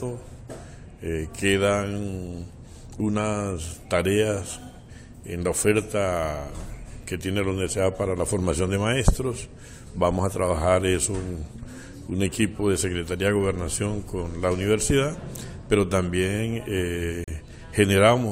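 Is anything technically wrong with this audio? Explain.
Yes. A gap between stream segments occurs at 17.24 to 17.28 s. Where one 6-second segment hands over to the next, their timestamps leave roughly 36 ms uncovered, and the player fills that hole with silence. The result is a brief, hard-edged dropout, though no audio content goes missing.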